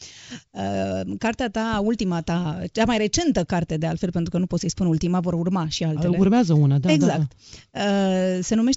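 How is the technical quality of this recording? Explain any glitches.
Technically the recording holds up with nothing going wrong at any point: it is speech carried over G.722 wideband telephone coding at 64 kbit/s, so the audio reaches up to about 7.7 kHz and has nothing above that.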